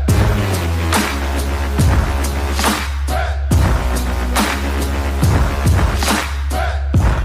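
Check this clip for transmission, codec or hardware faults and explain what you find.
No transmission, codec or hardware faults can be heard anywhere in the signal.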